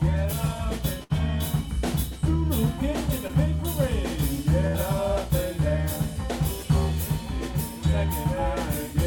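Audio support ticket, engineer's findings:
Burst of packet loss at 1.03–1.12 s and 4.67–4.76 s. Network jitter buffer starves. Receiver extends the last sound for roughly 60–70 ms, fading it to a held buzz or hiss. Playback then resumes further on, with about 60 ms of content skipped.

Short concealed packet loss at 3.28–3.31 s. Brief smear in the sound. Decoder continues the preceding signal for about 15 ms, then cross-fades back into real audio. Roughly 20 ms of original material is replaced by this fill.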